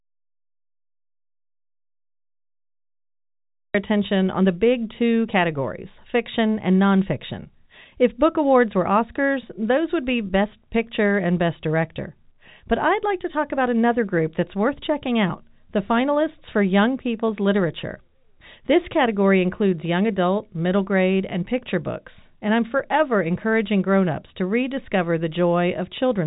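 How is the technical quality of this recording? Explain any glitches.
The recording has one clear glitch, right at the opening, heard through a telephone-band G.711 A-law path that carries nothing above about 3.8 kHz.

Audio dropout to silence, from the start to 3.75 s: the input feed was likely lost, through a dropped connection or a mute, while the recorder kept writing silence. The clip therefore begins in dead silence, with no room tone or line hiss at all, and the speech only appears at 3.75 s. Anything said during that opening stretch is missing.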